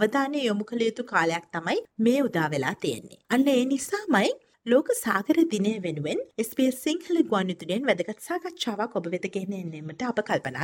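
No technical faults are audible.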